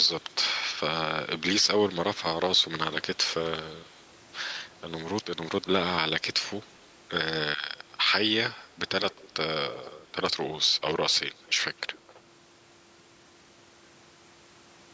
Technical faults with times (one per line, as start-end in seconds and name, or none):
0.21-0.35 echo leak
3.16-3.49 echo leak
3.81-3.98 echo leak
6.62-6.67 echo leak
9.11-9.30 echo leak
9.70-10.12 echo leak
10.67-12.21 echo leak